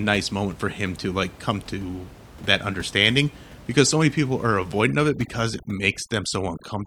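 From 4.87 s to the end, after "so many people are", overdone noise removal strips away quiet parts of the speech and leaves twinkling specks over near-silence, unlike a gate's clean on-off muting.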